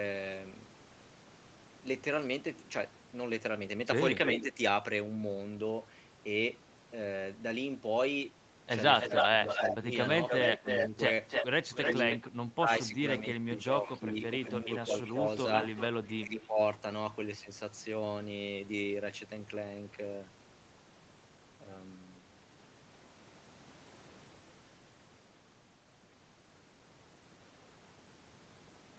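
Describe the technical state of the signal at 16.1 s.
At 16.1 s two faults overlap. The first is an echo leak, running from 13.86 s to 16.47 s. A delayed copy of the speech trails the original by 362 ms, roughly 15 dB quieter. It sounds like a faint second voice chasing the first. The likely cause is a loudspeaker on one side whose echo canceller failed to remove everything its microphone caught, so the residue came back down the line.

The second is speech suppressed in double talk, from 16.04 s to 16.59 s. The speech dips sharply, at its deepest by around 15 dB, for a total of about 0.4 s. It sounds like the level being yanked down and back up. This likely happens because both sides are active at once, and the echo canceller cannot tell the near talker from the echo, so it turns both down.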